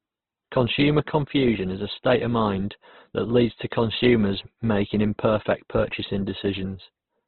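Throughout, the speech is heavily damaged, likely by Opus compression at a very low rate, around 12 kbps. Nothing passes above 4.2 kHz. It sounds rough, grainy and muffled.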